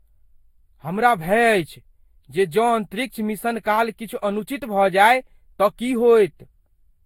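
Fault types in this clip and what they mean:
channel delay (comb filtering): One channel of this speech arrives a few samples late, well under a millisecond, and the two are summed. Matching content cancels at evenly spaced frequencies. The first notch sits around 7 kHz, dulling the top end and adding a phasey edge.
generation loss: The speech sounds swirly and smeared, with blurred attacks and a hollow quality. Nothing is present above 16.6 kHz. The likely cause is about four rounds of lossy re-encoding, consistent with Vorbis at roughly 56 kbit/s. Each pass adds fresh errors.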